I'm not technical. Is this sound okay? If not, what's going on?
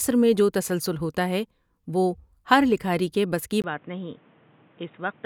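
No. At 3.62 seconds, just after "لکھاری کے بس کی", there's a tiny gap, then the speech turns dull and boxy, a bit quieter, with new background hiss until the end. This is likely an input switched to a poorer device, such as a headset microphone.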